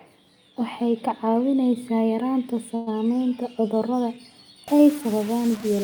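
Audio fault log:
2.75 to 2.89 s, call audio freeze: The speech halts and the last instant of sound is drawn out as a brief fading buzz lasting about 113 ms, with no true silence. When the sound resumes it picks up exactly where it left off, so nothing is lost. The rest of the clip simply arrives about 113 ms later. This is likely a late packet burst that drained the jitter buffer, with the receiver stretching the final sound to cover the wait.
4.68 s to the end, low bit depth without dither: The final stretch of speech turns grainy and rough. The distortion grows and shifts with the speech itself, and the softest parts drop away or sputter between steps rather than sitting on a smooth noise floor. The error sits only roughly 20 dB below the signal. It likely comes from truncating the audio to about 5 bits with no dither, so the rounding error stays locked to the waveform.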